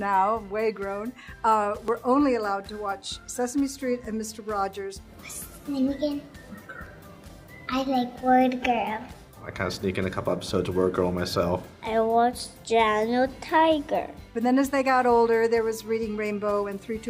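Small jumps in the sound at 1.88, 2.92 and 6.86 s, skipping about 10, 5 and 15 ms respectively, are likely dropped buffers (overrun), where unread samples were overwritten and the two sides were joined.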